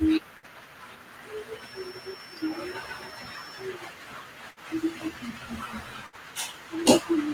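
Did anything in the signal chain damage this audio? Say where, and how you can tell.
Yes. Three short dropouts, at 0.37 to 0.46 s, 4.51 to 4.59 s and 6.06 to 6.16 s, each hold the last sound for 52 to 62 ms and fade it before jumping ahead. That is a burst of packet loss on the network, with about 60 ms of audio never arriving.

From 1.52 to 3.71 s a thin, steady 5.4 kHz whistle sits well below the speech, about 20 dB down, swelling and fading slowly in level. This is likely a feedback whistle: a loudspeaker-to-microphone loop held just at the edge of feedback, ringing at one frequency.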